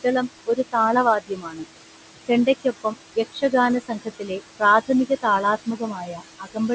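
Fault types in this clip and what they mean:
Noise suppressor artifacts: The suppressor lowers each frequency band it judges to be steady room noise, by about 21 dB, so the background sinks in pauses and rises under the speech. Unlike a simple gate, the noise changes character, not only level.
Speech cut by the noise suppressor: In six spans between 0.47 and 6.58 s, quiet parts of the speech are mistaken for noise and pulled down by about 13 to 21 dB, so soft consonants and endings sound swallowed. Here the speech itself fades, not just the background.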